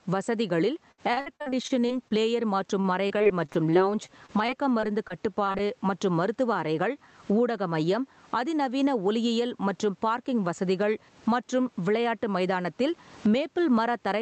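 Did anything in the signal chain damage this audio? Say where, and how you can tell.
Yes. Right through the clip the gain swings something like 15 dB, with the dynamics flattened. That's gain pumping, likely from input gain set far too high with a fast limiter or compressor clamping down on each peak.

On the network side, there's repeated packet loss (robotic sound) from 0.91 to 2.12 s: ten gaps, the longest 65 ms, with about a quarter of that stretch patched over. It sounds choppy because each hole is filled by stretching the last sound. It returns from 2.80 to 5.61 s with fifteen shorter gaps, the longest 36 ms, just before "மற்றும் மருத்துவ அறைகள்".

Then the jitter buffer speeds things up. After "மற்றும் பார்க்கிங் வசதிகள் மற்றும்", from 12.19 to 12.66 s, the speech runs about 6% fast at unchanged pitch. The receiver trimmed roughly 40 ms of pitch-period slices to shed excess buffered delay, so it sounds briefly hurried.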